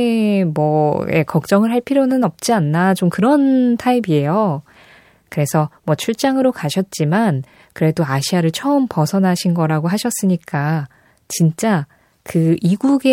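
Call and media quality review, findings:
Nothing stood out on listening to this speech recording.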